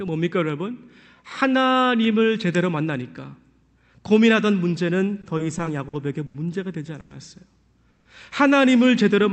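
From 5.21 to 6.35 s the speech gets choppy with repeated stalls (stutter): six short holes, the longest about 80 ms, are filled by stretching the last sound, about 200 ms in all, because packets kept arriving late and the jitter buffer kept draining. Nothing is lost, but it drags. Then come two brief call audio freezes, at 7.00 to 7.11 s and 7.90 to 8.06 s. Each is a fading buzz-like hold of roughly 100 ms and then 150 ms, likely from packets held up in transit, before the audio picks up where it stopped. All of it sits on a call path whose 8 kHz bandwidth fits Opus.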